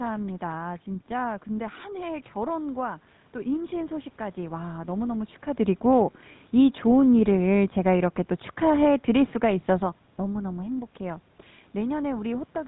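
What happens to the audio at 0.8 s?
At 0.8 s you're hearing the GSM full-rate codec, which runs through the whole clip. It models the vocal tract, drives it with sparse regular pulses and cuts everything above 4 kHz, so the speech comes out buzzy and gravelly, consistent with a 13 kbps stream.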